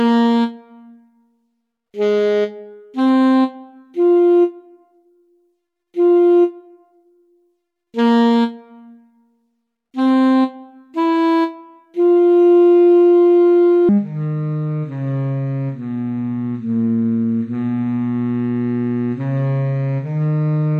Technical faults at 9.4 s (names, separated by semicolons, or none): none